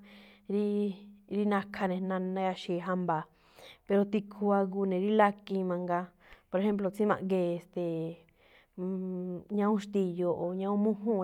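Nothing stood out as a technical fault on listening to this speech recording.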